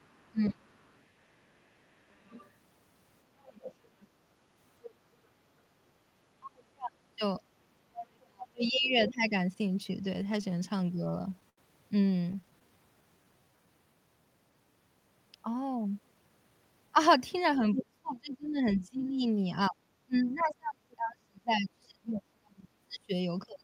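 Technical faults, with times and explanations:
0.00–4.94 s, 7.39–9.11 s, 17.75–17.84 s and 20.40–20.44 s, other side's voice leaking through: a second, fainter voice sits under the sound, about 20 dB down at first, about 15 dB down mid-clip, nearly as loud as the talker briefly at 17.75 s, then faint. This is likely loudspeaker echo the canceller left in the microphone signal.
0.31–0.68 s, 6.40–9.32 s and 17.76 s to the end, speech suppressed in double talk: the talker's level drops sharply, by roughly 25 dB early and up to about 35 dB later, with pieces cutting out over a second or more. The likely cause is the echo canceller turning everything down while both sides spoke.
10.23–11.59 s and 12.21–12.63 s, repeated stalls (stutter): the audio hitches 14 times and then 5 times, with the longest hold 81 ms. Each time packets arrived late, the receiver stretched the last sound until data resumed, so nothing is lost but delivery drags.
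12.67–13.67 s, jitter buffer slow-down: the sound plays at about 87% speed with unchanged pitch, drawn out by roughly 136 ms in total. The receiver repeated pitch periods to rebuild a depleted buffer reserve.
15.55–17.15 s, jitter buffer speed-up: the sound runs about 10% fast at unchanged pitch and feels hurried, with roughly 150 ms removed. The receiver cut short pitch-period slices to shed excess buffered delay.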